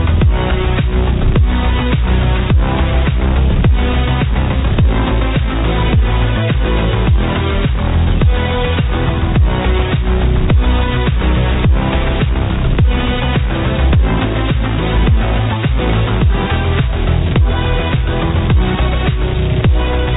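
No technical faults can be heard anywhere in the clip.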